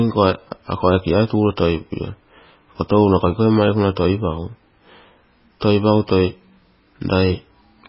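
From start to finish, the speech carries heavy damage that is likely MP3 compression. Nothing is heard above 5.5 kHz, so the treble is cut off flat and s sounds lose their edge. The encoder was short of bits, which fits a very low rate of around 16 kbps. It dropped weak frequency lines, and these flicker on and off between frames. The result sounds watery and swirly, with metallic chirps on sibilants and smeared attacks.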